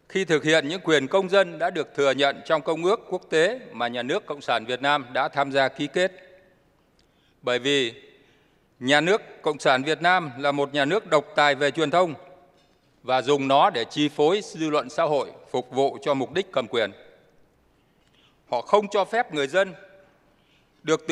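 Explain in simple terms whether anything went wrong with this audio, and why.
Nothing went wrong with this audio: the signal comes through steady and intact, with no dropouts, glitches or distortion anywhere in it.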